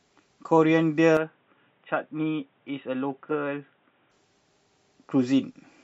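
From 1.17 s to 4.11 s the speech turns dull and boxy, nothing above 3.8 kHz, about 5 dB quieter, over a new noise floor, with no gap at either change. Input switched to a poorer device is the likely cause: a narrower-band microphone took over, then released.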